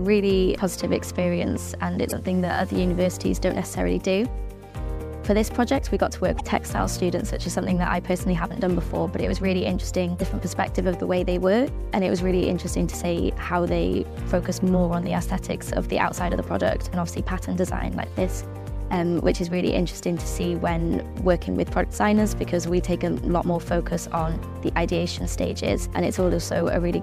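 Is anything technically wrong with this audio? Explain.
Yes. There is damaged data in a compressed stream at three points: 2.08 to 2.12 s, 6.36 to 6.41 s and 10.18 to 10.22 s. Each lasts about 44 ms. Corrupted bytes there make the decoder misread its frames and lose sync until it finds the next valid header, so you hear a brief chirp or squawk. On a spectrogram each appears as a short vertical smear of broadband or garbled energy. The waveform shows an abrupt discontinuity at each point.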